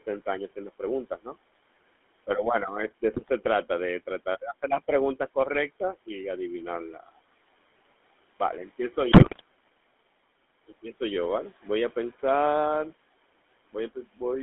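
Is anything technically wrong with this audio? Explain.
Yes, there are three problems, and the room noise sitting about 20 dB under the speech isn't one of them.

The GSM full-rate codec colours the whole clip. The sound points to the old 13 kbps GSM coder, which models the vocal tract and drives it with sparse, regularly spaced pulses. The band runs only from 250 Hz to 3.5 kHz, and the voice has that buzzy, gravelly roughness throughout.

Speech cut by the noise suppressor shows up at 1.1 to 1.37 s and again at 13.95 to 14.21 s. Each time the suppressor mistook part of the speech for background and pulled it down by about 14 dB and about 13 dB. Roughly a tenth of a second goes faint or swallowed.

GSM bit errors hit at 3.14 to 3.30 s and 9.12 to 9.41 s. Corrupted filter, pitch and gain values reached the decoder, bending the spectrum and spiking the level frame by frame. The lengths fit roughly eight and fourteen 20 ms frames, and you hear squawks, pops and gargling, with the second burst the rougher of the two.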